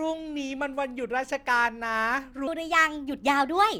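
Section at the wrong speed from 2.47 s to the end of the speech: playback runs 1.28 times fast, with pitch up about four semitones, likely from a clock mismatch.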